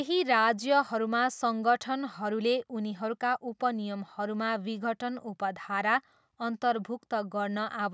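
Nothing here counts as a fault: the speech has simply gone through a call's microphone processing, which trims away the deepest bass and leaves nothing above 8 kHz, and that's just how that path is meant to sound.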